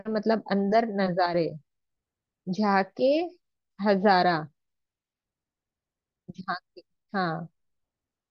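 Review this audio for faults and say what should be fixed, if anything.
A stereo channel likely dropped out for a moment, from 1.26 to 1.34 s, so for roughly 80 ms only one side fed the mono sum. The speech, being common to both channels, falls abruptly by about 6 dB for that span and then jumps back, a brief dip in loudness. This one channel drop-out should be fixed by raising that span by about 6 dB. To prevent it, check stereo cabling, connectors and per-channel routing, and confirm both channels stay present before summing to mono.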